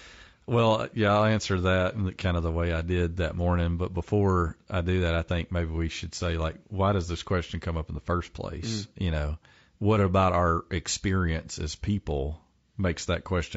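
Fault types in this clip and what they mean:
Low-delay AAC compression: the speech sounds rough and grainy throughout, with noise filling the gaps between harmonics and a thin, synthetic top band. The likely cause is low-delay AAC coding, whose short frames resolve pitch poorly, with damage fitting a 32 kbps rate.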